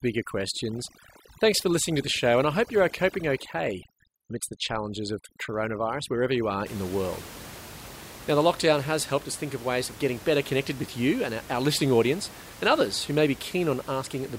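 Speech, and the first 6.66 seconds suffer from overdone noise removal: the denoiser is clamping bands that sit near its noise estimate, so the background drops and breaks up into twinkly specks. It clears up right before "in the world", where the room noise comes back at about 18 dB below the speech.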